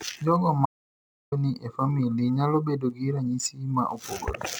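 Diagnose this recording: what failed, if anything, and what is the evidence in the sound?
An audio dropout to silence cuts the speech off abruptly at 0.66 s, and it resumes mid-flow at 1.32 s, leaving about 0.66 s missing. The gap is dead silence with no room tone or hiss, which rules out a noise gate or low level. The absence of smeared or repeated fragments rules out network concealment. The failure is at the input stage, likely a momentary device disconnect or mute while the recorder kept writing silence.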